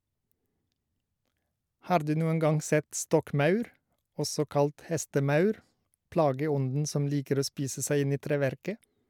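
No technical faults are audible anywhere in the speech.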